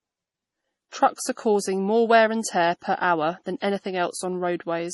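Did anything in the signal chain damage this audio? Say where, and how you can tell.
Yes. The whole clip sounds watery and swirly, with the treble stopping dead at about 11.5 kHz and metallic chirps where fine high detail should be. That is heavy damage at the codec stage, likely MP3 compression at a low bitrate, consistent with roughly 32 kbps. Short of bits, the encoder discards everything above a fixed cutoff and zeroes weaker frequency lines, which then flicker on and off from frame to frame and produce the swirl.

Pre-echo appears from 3.60 to 3.62 s: a brief hiss of about 23 ms arrives just ahead of a sharp attack, which itself sounds soft and smeared. This also comes from the codec. The transform spreads its quantisation noise across the whole block, so noise sized for the loud onset also fills the quiet moment before it, where nothing masks it.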